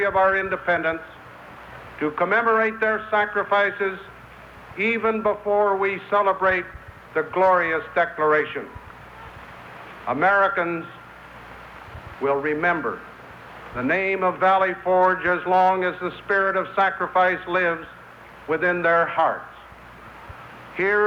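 No technical faults can be heard anywhere in the audio.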